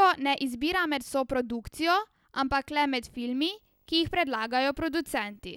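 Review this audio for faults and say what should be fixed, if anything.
Video or display buzz runs from 3.37 to 5.43 s: a screen or video cable is coupling into the speech path, giving a faint 50 Hz field-rate buzz with hash above it and a thin whine at the 15.6 kHz line rate, sitting well below the speech level. Keep video cables and monitors physically apart from audio lines, and use balanced, well-shielded connections to stop it.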